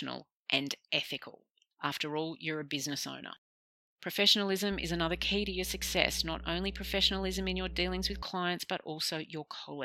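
From 4.72 to 8.23 s the speech carries mains hum, a steady low tone at 60 Hz with a few low harmonics, sitting only somewhat below the voice. Power-line current has leaked into the signal path, most plausibly through a ground loop or a nearby transformer. Unlike rumble or wind noise, which wander and spread across low frequencies, this tone holds one fixed pitch and level.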